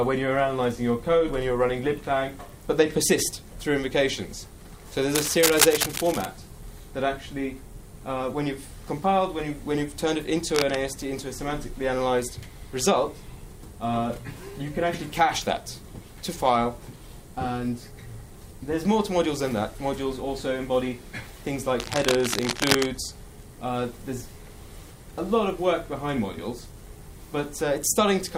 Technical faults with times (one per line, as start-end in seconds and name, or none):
5.15-6.25 cable scratch noise
10.55-10.75 cable scratch noise
21.79-22.86 cable scratch noise